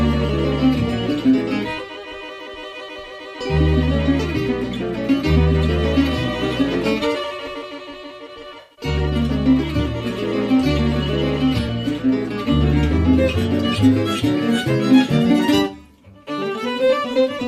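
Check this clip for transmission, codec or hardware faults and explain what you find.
Two brief dropouts point to AAC frame loss with concealment. From 8.6 to 8.85 s, about 150 ms of data goes missing across a 170 ms stretch, with the longest gap around a tenth of a second. The decoder rebuilds each gap from the last good spectrum, so the sound turns smeared and noisy-phasey rather than going silent. A second, roughly 21 ms loss at 17.13 to 17.16 s, which fits a single lost frame, gives a short smeared blip.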